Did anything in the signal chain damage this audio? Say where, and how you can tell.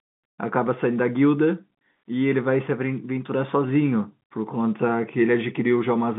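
No, nothing damaged it.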